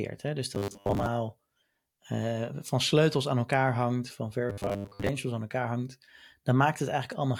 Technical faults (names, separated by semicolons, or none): robotic sound from repeated short buffers